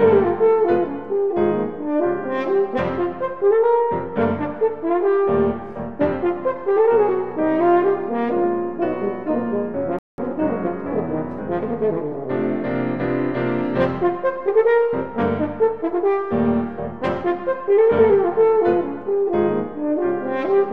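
A rebuffering stall at 9.99 to 10.18 s drops the audio to silence for about 0.19 s, then it resumes exactly where it stopped.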